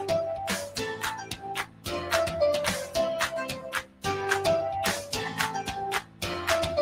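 A noise suppressor built for speech stays active across the whole clip, treating steady sound as noise, so level swings by around 10 dB and held material pumps and thins. From 1.15 to 1.87 s, 3.54 to 4.05 s and 6.01 to 6.23 s, the sound is cut by the noise suppressor by about 13 dB at its deepest, so sustained parts sink and decays end early.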